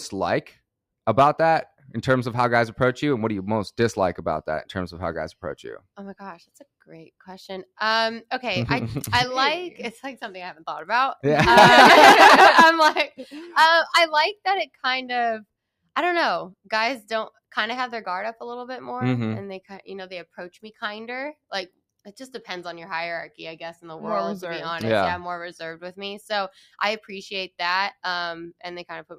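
Sound cut by the noise suppressor occurs from 14.66 to 14.85 s. The audio there sinks sharply, by about 21 dB at its lowest point, and the dip affects roughly 150 ms of material. The suppressor misjudged this stretch as background noise rather than wanted signal and applied heavy gain reduction to it, so the level briefly collapses and then recovers. The result is a hole in the passage.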